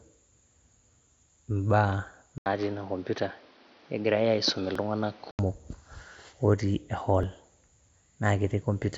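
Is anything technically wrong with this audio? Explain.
Yes. From 2.38 s to 5.39 s the sound turns duller and boxier, with a quiet new noise floor about 30 dB below the signal, and an 80 ms gap at the changeover, but no obvious level change. The likely cause is an input switched to a poorer device whose narrower band and own background noise replace the normal mic's character until it switches back.

At 4.75 s and 7.23 s there is a slight jump in the sound and no silence. Each removes only a few milliseconds, which points to a likely dropped buffer (overrun): samples were overwritten before being read, so the audio on either side is spliced directly together.

Outside the switched stretch, the mSBC headset codec passes content up to about 8 kHz, with light grain on louder sounds.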